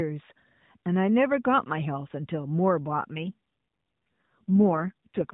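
From about 3.18 s to the end there's an AMR rate drop: the speech goes rougher, buzzier and more synthetic, with no gap and no change in bandwidth. That fits the link falling back from 12.2 to 4.75 kbps, with the spare bits going to error protection on a weak radio channel.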